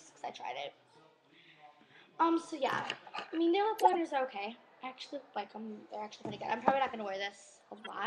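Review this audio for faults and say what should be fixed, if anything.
Corrupt frames were decoded at 2.67 s, 3.78 to 3.95 s, and 7.77 to 7.87 s. Flipped bits gave wrong gains and misread codes. Energy landed at wrong frequencies as chirps and noise bursts. The middle burst is loudest, about -15 dBFS. Use error checking so damaged frames are concealed rather than played.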